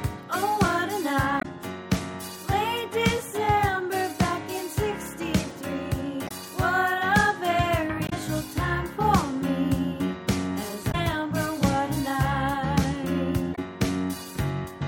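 Five short bursts of damaged data in a compressed stream interrupt the audio, at 1.37, 6.24, 8.05, 10.88 and 13.52 s, each lasting 65 to 80 ms. Corrupted frames make the decoder misread its input and resynchronise, producing brief chirps or squawks.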